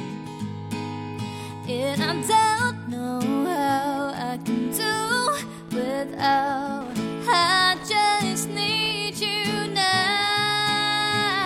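From 3.62 s onward, Wi-Fi interference: rectified 102.4 ms radio beacons tick about 25 dB below the signal, drawn as evenly spaced spectrogram stripes.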